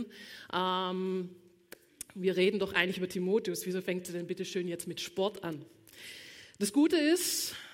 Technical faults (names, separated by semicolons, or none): none